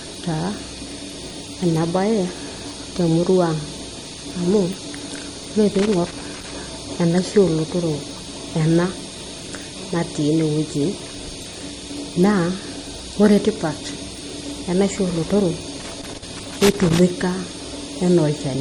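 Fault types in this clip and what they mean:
MP3 compression: The speech sounds watery and swirly throughout, with smeared onsets and metallic chirping on s sounds, and nothing above 19.1 kHz. This is likely low-bitrate MP3 coding, consistent with roughly 48 kbps, where weak frequency components drop in and out between frames.
Loose connector crackle: Irregular bursts of scratchy crackle interrupt the audio from 5.75 to 6.56 s and again from 15.8 to 17.03 s. A worn or dirty contact is rapidly making and breaking, chopping the signal.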